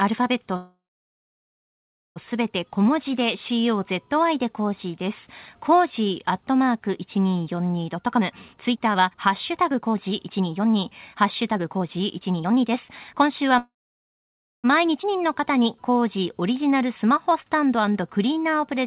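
From 0.56 to 2.18 s and again from 13.58 to 14.66 s there is a call audio freeze. Packets were likely held up and the jitter buffer ran dry. The last sound carries on as a fading buzz or hiss and then goes silent for about 1.4 s and 0.9 s. On a spectrogram this shows as a smeared tail followed by a blank band. Nothing is lost; the audio simply resumes later.

From 7.95 to 13.55 s a jitter buffer speed-up removes pitch periods repeatedly, cutting about one and a half seconds. The audio runs at 126% speed with unchanged pitch and sounds hurried. Harmonic spacing on the spectrogram stays the same while events crowd together in time.

Between 15.02 and 15.05 s a skip ahead drops about 0.7 s of audio. Playback jumps forward almost seamlessly, and the waveform shows an abrupt splice with only a 13 ms gap.

From 15.18 to 18.81 s a jitter buffer slow-down repeats pitch periods, adding 340 ms. The audio plays at 91% speed, drawn out but at the same pitch, with stretched, evenly repeated cycles visible in the waveform. 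Throughout, the G.711 call path leaves nothing above 4 kHz.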